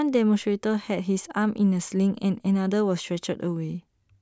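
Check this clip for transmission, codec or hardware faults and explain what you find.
Nothing in the speech points to a fault anywhere along the signal chain.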